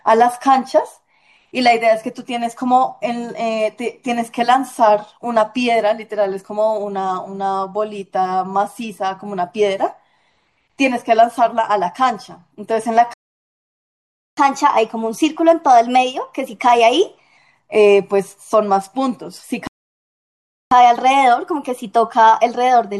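At 13.14 s the speech stops dead in mid-flow and stays silent for 1.24 s, until 14.37 s. This is a playback stall, likely caused by the player running out of buffered data or its output thread being blocked. The same stall pattern returns at 19.67 s, with 1.04 s of silence ending at 20.71 s.

Immediately after each stall, the player runs a catch-up at higher speed, resampling its backlog at 1.1 times normal rate. Because resampling changes tempo and pitch together, the speech sounds hurried and is raised by roughly one and a half semitones. The first catch-up lasts from 14.37 s to 17.37 s, then drops back to normal speed and pitch. The second starts at 20.71 s and continues to the end of the clip without returning to normal.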